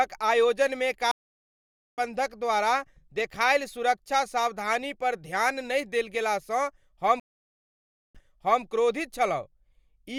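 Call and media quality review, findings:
Stream reconnect, 1.11–2.00 s: about 0.86 s dropout, then speech picks up roughly 0.7 s further on, so a chunk is skipped. Connection dropped, player reconnected and spun up a fresh decoder mid-stream, jumping to the live edge.

Stream reconnect again, 7.20–8.63 s: about 0.95 s of silence, then playback resumes 0.48 s earlier and repeats a bit. Same reconnect and new decoder, this time with the server resending a buffered burst.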